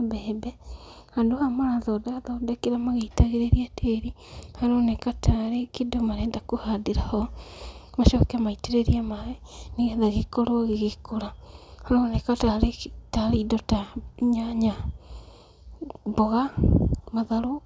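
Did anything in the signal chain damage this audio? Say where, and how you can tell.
No, nothing in this speech recording stood out as damage from any stage of the signal chain on listening.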